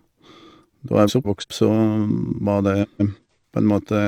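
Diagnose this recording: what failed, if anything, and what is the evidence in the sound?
Network delivery put frames out of order at 1.08 to 1.44 s and 2.83 to 3.19 s: two adjacent runs of about 171 ms each, likely four-frame blocks, swap places, causing garbled flutter. Unlike packet loss, no time goes missing.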